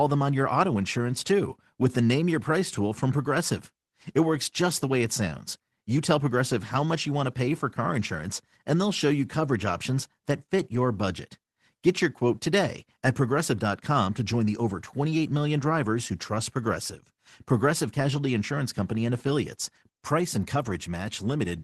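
Brief patches of rough, noisier sound, with no gap or dropout, occur at 4.69 s, 9.93 to 9.95 s and 10.75 to 10.77 s, each 20 ms long, and again at 20.65 to 20.71 s for 40 ms. Each is a lost packet rebuilt from error correction. The audio travelled a call path coded with Opus. The following packet carried a coarse, low-bitrate copy of the missing audio, and the decoder played that copy instead, producing the grainy texture. The longer last event points to two separate packets lost.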